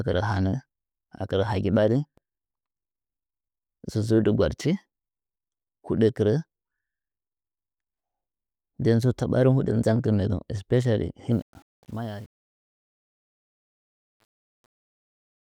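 From 11.32 s to the end at 15.46 s, the speech fades out, and the fade suffers truncation distortion. The level stage keeps too few bits and adds no dither, which fits an 8-bit path. As the level sinks toward the smallest step, the waveform collapses into coarse square steps. From 11.74 s onward it is worst. The tail turns gritty.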